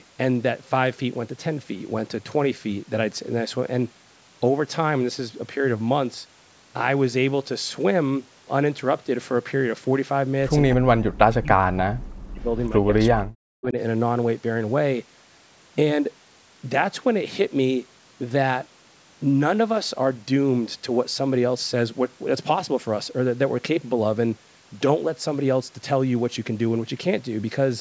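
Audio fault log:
10.73–12.92 s and 13.09–13.77 s, speech suppressed in double talk: the speech sinks sharply, at its deepest by about 40 dB, over roughly two seconds and then a further two-thirds of a second, with a brief recovery between. The likely cause is an echo canceller that could not separate the talker from incoming far-end audio and damped both. Unlike a network dropout, the loss comes from the canceller turning the voice down rather than from lost audio.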